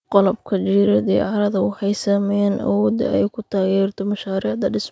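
No technical faults can be heard in this speech recording. It has passed through a call's microphone processing, which trims the lowest bass and leaves nothing above 8 kHz.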